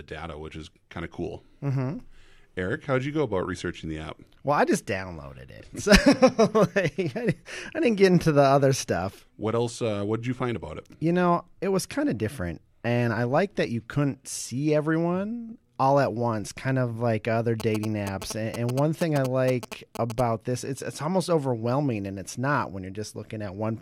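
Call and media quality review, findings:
GSM signalling bursts, 17.6–20.21 s, after "kind of like other", clearing before "this it's it's almost". Galloping ticks and short 217 Hz buzzes at about 10 dB below speech. A nearby 2G phone's signalling bursts are rectified in the audio circuit. Broken groups rule out steady mains hum or a continuous in-call buzz.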